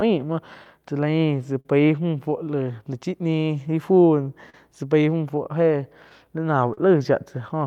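Right from the start, the sender's clock runs roughly 3% slow against the receiver's, so this is clock drift between sender and receiver. The jitter buffer keeps running low, and you get small, unevenly spaced timing wobbles all the way through the speech.

From 0.00 to 1.66 s there are scattered short gaps, about four of them. Each lost packet was covered by extending the last sound, about 70 ms in total and none much over 50 ms. Nothing drops out, but you can catch ticks and smeared bits.

Repeated timing corrections run from 0.79 to 6.26 s. Because the sender lags, the receiver keeps repeating slivers to hold playback at 99% speed, roughly 70 ms added overall. Each edit is small.

At 4.50 to 4.55 s there's a short stall from a late packet. The buffer ran dry and the sound was held for 38 ms until the packet showed up, then carried on with nothing lost. You hear a brief stretched moment, maybe with a little buzz.

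Finally, 5.77 to 6.78 s brings a second patch of scattered short gaps, about three, concealed with roughly 50 ms of filler and the longest around 40 ms. Again these are small smears rather than anything missing.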